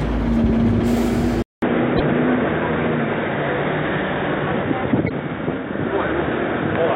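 A recording of everyday sounds that goes dull and boxy at 1.42 s after a silence of about 200 ms. The likely cause is the input switching to a poorer device. On a spectrogram, everything above 3.8 kHz vanishes from there to the end, and a new noise floor appears roughly 35 dB below the signal, while the waveform's level stays about the same. Damaged data in a compressed stream is heard as short chirps or blips from 1.97 to 2.01 s and from 5.06 to 5.11 s. There the decoder misreads corrupted frames and must find its place again, which shows as brief broadband vertical smears on the spectrogram and abrupt, malformed bursts in the waveform.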